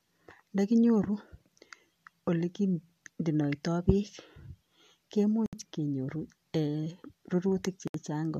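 Gap at a join of encoded pieces, at 5.46 s and again at 7.88 s: the speech breaks into silence for about 68 ms each time, from 5.46 to 5.53 s and from 7.88 to 7.94 s, then resumes exactly where it left off. Each break marks a seam where separately encoded segments were butted together without trimming, so the encoder's start-up delay and the padded final frame of the previous piece both survive as dead air. The codec smears the edges of each hole, so the fully silent part is shorter than that.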